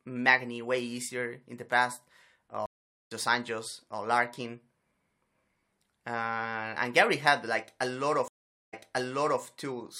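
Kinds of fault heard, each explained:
Stream reconnect: at 2.66 s and 8.28 s (after "had like") the connection drops for 0.44 s and 0.45 s, then a fresh decoder resumes roughly half a second later, then 0.7 s earlier.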